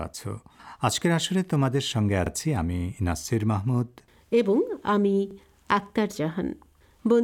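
Overlapping chunks at 2.26 s and 5.31 s: each 3-second chunk begins 44 ms early, so that slice replays at the join as a brief stutter.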